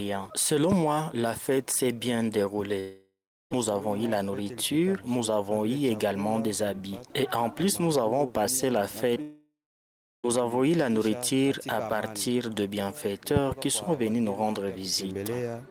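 At 0.72 to 0.74 s a single loud pop stands about 10 dB above the surrounding sound, which continues underneath. It is likely a sudden voltage step or pulse, from a plug, a switch, static or a driver glitch, entering the signal chain.

From 2.79 to 3.53 s comes a long network dropout: likely 720 ms of audio never arrived. The receiver extended the last sound as a fading buzz or hiss, leaving about 340 ms of silence or low steady noise before playback resumed past the missing part. A second, longer dropout runs from 9.22 to 10.26 s, losing 1.02 s, with roughly 670 ms left silent or as low noise.

Just before that, at 9.15 to 9.18 s, is a short concealed packet loss. About 20 ms failed to reach the decoder in time, and the gap was filled by continuing the preceding sound before blending back, giving a brief smear or wobble.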